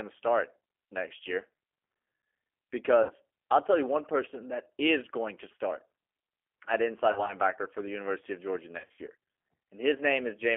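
Throughout the speech, the G.729 codec at 8 kbit/s confines the sound to a 300 Hz to 3.4 kHz telephone band, so a spectrogram shows an empty region above 3.4 kHz. Its coarse pulse-based rebuilding gives every syllable a plainly rough, synthetic grain.

VoIP packet loss concealed by the speech codec occurs at 3.03 to 3.12 s, right before "I'll tell you one". It recurs at 7.12 to 7.36 s, between "at inside" and "for the", in scattered short gaps. The heaviest case is at 8.78 to 9.01 s, where dropouts spread over about 200 ms with a longest run near 60 ms. In each case the decoder stretches its last pitch and filter into a fading buzz or coloured noise. On a spectrogram this appears as flat, repeated harmonic bands. The waveform shows a sagging envelope before the speech recovers.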